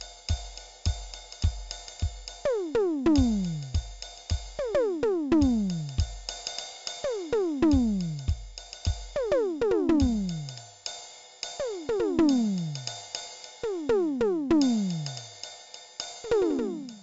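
4-bit ADPCM compression runs through the whole music clip: each sample is coded as a coarse step from a prediction, leaving gritty hiss that rises with every loud passage and smears sharp attacks. Nothing sounds above 7.7 kHz, which fits a 64 kbps stream at a low sample rate.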